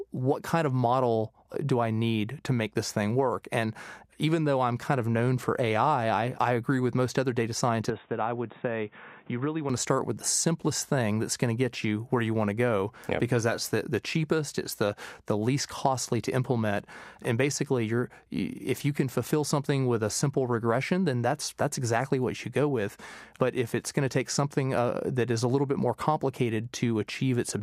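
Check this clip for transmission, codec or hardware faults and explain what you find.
One fault appears in this speech clip, between 7.90 and 9.70 s. The sound abruptly loses its top end, with nothing above 3.8 kHz, drops a few decibels in level, and gains a new background noise sitting about 30 dB under the speech. This is likely an input switched to a poorer device: a narrower-band microphone path with its own gain and noise. The change happens without any gap, so the speech turns dull and boxy, then returns to full bandwidth.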